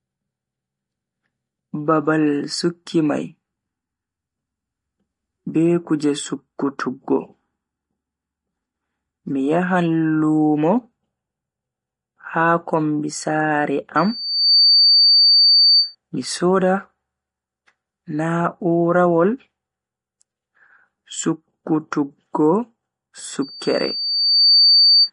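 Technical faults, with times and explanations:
Throughout: MP3 compression, likely. Nothing is present above 10.6 kHz, and the speech has a watery, swirling quality with smeared consonant attacks. This fits a bit-starved encoder at around 40 kbps that cuts the treble at a fixed frequency and drops weak spectral lines, which then flicker on and off between frames. On a spectrogram there is a flat ceiling at 10.6 kHz, with patchy holes and islands of energy below it.
13.97–15.95 s and 23.42–25.10 s: loudspeaker feedback squeal. A single tone at 4.6 kHz swells up and howls over the speech, reaching about 5 dB above it. It builds over roughly half a second the first time and about a second the second time. The microphone is picking up its own loudspeaker, and at that frequency the loop gain exceeds one, so the tone feeds itself. On a spectrogram it appears as a bright horizontal line at 4.6 kHz that grows stronger, and the waveform envelope swells.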